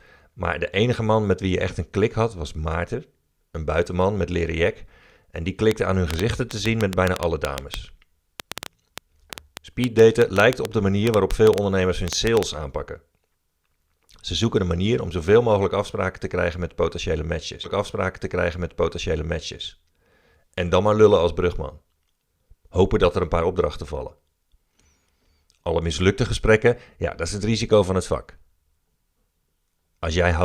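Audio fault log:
5.71–12.44 s, train of clicks: An outside source is likely injecting short pulses into the signal path, either interference from nearby equipment or a faulty connection or power supply. The result is a run of roughly forty near-identical clicks at an uneven spacing, averaging about six per second. Peaks stand around 20 dB above the speech, so the ticking cuts through clearly and stays audible in the gaps between phrases.
17.63–19.63 s, stream segment repeated: Right after "te krijgen met potentiële", the player fetched or queued the same chunk of the stream twice. It jumps back and plays two seconds of speech a second time, which adds 2 s to the running length. The switch back is marked by a small blip, and the listener hears the same passage again as though the speaker had restarted mid-sentence.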